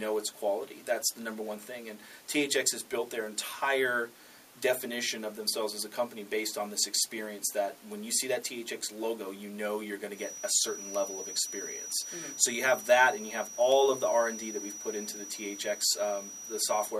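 From about 10.1 s to the end there's a feedback whistle, a thin steady tone near 5.8 kHz sitting roughly 10 dB under the sound and swelling and fading slowly in level. Likely the speaker-to-mic loop is hovering right at the feedback point without running away.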